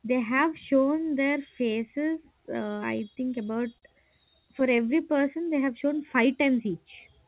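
Repeated stalls (stutter) from 2.98 to 3.84 s: six brief gaps, the longest 40 ms, while packets arrived late, and the receiver stretched the last sound so the speech drags and catches. A jitter buffer slow-down follows from 4.82 to 5.66 s, just before "shown five": repeated pitch periods add about 74 ms, so the speech runs at 92% speed, with the same pitch.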